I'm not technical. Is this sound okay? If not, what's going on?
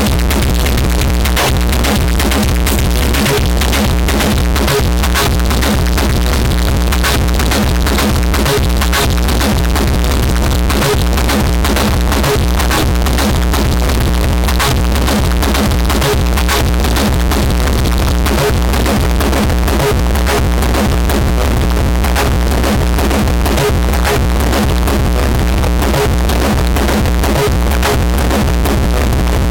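No. The file's numbers were stored in one format but are being played back as if they were another: this is likely a float read as integer problem, where 32-bit float data is read as 32-bit integers. The player misreads every value, so from the very start to the end the sound is flattened into a blunt, buzzy square shape at a fixed high level. It comes out very loud and harsh, with quiet background noise pushed up as loud as the main sound.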